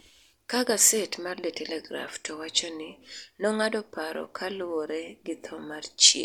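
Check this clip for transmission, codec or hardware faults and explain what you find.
Listening closely, I find no transmission, codec or hardware faults anywhere in the speech, and the signal holds steady and intact throughout.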